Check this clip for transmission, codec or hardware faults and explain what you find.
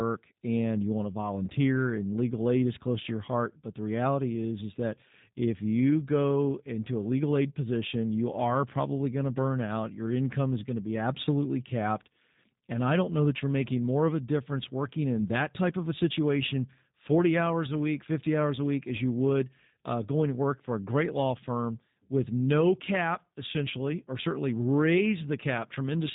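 One codec fault runs through the whole recording. The speech has a slightly rough, buzzy, synthetic edge from start to finish, and everything above about 3.8 kHz is missing, so the voice sounds boxed in and thin. This is plainly audible G.729 codec damage, consistent with G.729A at a rate that fits 8 kbit/s. The codec doesn't send the waveform. It rebuilds each 10 ms frame from a vocal tract filter, a pitch predictor and a few pulses, which produces the grainy, artificial quality.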